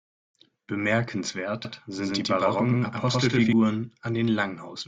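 From 1.65 s to 3.53 s the speech is heard twice: a doubled audio track, with a second full-band copy trailing by about a tenth of a second at roughly equal loudness. It has no decay or room colour, and it starts and stops abruptly. This is likely a second capture through a slower path or two misaligned copies in an edit. A spectrogram shows every onset and harmonic band repeated about 100 ms later, and the waveform shows each burst followed by a same-sized twin.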